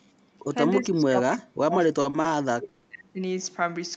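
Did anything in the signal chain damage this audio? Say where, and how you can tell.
Yes. At the call-processing stage, the echo canceller likely suppressed the speech during double talk. There is a brief shallow dip of about 5 dB at 0.48–0.55 s, then a deep one of about 35 dB from 0.8 to 3.2 s. The waveform envelope collapses, and the spectrogram shows energy thinning.

Three short stalls from a late packet occur in the network and jitter buffer, at 2.01, 2.10 and 2.21 s. At each, the receiver held the last sound for 30 ms, then resumed without losing anything. The spectrogram shows brief smeared, stationary patches with flat harmonics.

A call audio freeze from 2.68 to 2.87 s was likely caused by a network delay that emptied the jitter buffer. The receiver filled 170 ms by continuing the last sound as a fading buzz or hiss, then carried on where it stopped. It appears as a stretched, decaying band.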